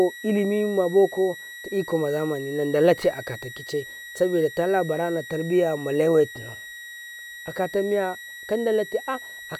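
Speech, with a switching supply whistle sitting under it the whole way through: a thin high tone wandering between about 1.90 and 1.93 kHz, roughly 15 dB below the speech. A power supply dropping into an audible burst mode, with its pitch shifting as the load changes, would explain it.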